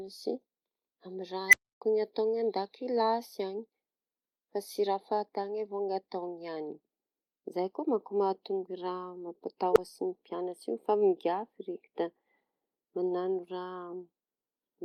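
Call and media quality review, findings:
Beep swelling to clipping within about 50 ms, then dropout: 1.48–1.81 s (around 2 kHz, 0.28 s silence), 9.71–9.78 s (around 400 Hz). Unstable filter, recursive feedback diverging until reset.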